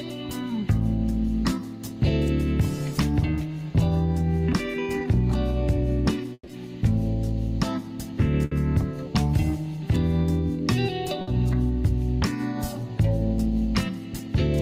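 Three bursts of packet loss show up here, at about 6.33, 8.45 and 11.21 s. In each one the receiver covers the gap by stretching the last bit of sound and fading it down, then jumps ahead, so the stretch in between is simply gone. The first is the biggest, about 140 ms patched and missing, and it drops to silence for about 40 ms before the audio picks back up. The other two are shorter, about 60 ms each.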